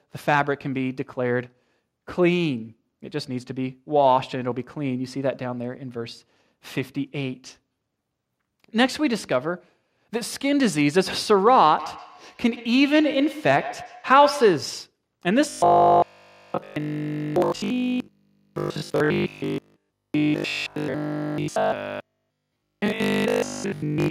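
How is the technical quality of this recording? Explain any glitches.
Two glitches mar the speech.

From 11.79 to 14.79 s there is feedback echo between two devices. One device replays the other's microphone, which recaptures it. Repeats return about every tenth of a second, peaking about 13 dB below the speech.

From 15.50 s to the end, the speech turns into robotic sound. It becomes a rigid 50 Hz metallic buzz throughout. The likely cause is repeated short buffers of about 20 ms standing in for missing audio.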